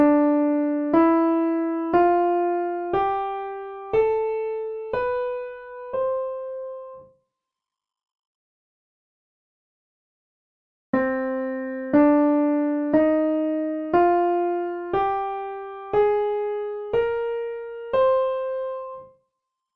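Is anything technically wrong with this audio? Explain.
No, nothing technically wrong can be heard anywhere in this audio.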